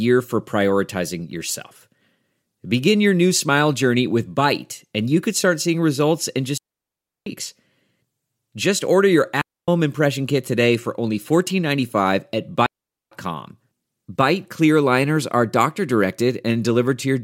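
At 6.58 s, right after "start seeing results in", the speech cuts to near silence for about 0.69 s. This is a digital wireless dropout. The receiver lost too much data and muted with a very fast fade. It happens again at 9.41 s for 0.27 s, after "order your" and before "impression kit today for", and at 12.66 s for 0.45 s. Each gap is a clean hole with no noise burst around it.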